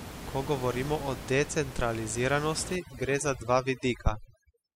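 From 2.76 s to the end, the background drops and breaks up into twinkling specks: overdone noise removal, gating bands near the room noise.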